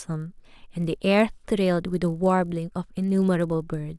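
Resampler restarted on every block, throughout the clip: the 48 kHz to 24 kHz conversion was run on each 20 ms block separately, so every block edge lacks its true neighbouring samples and carries a small error, heard as a 50 Hz buzz riding under the speech.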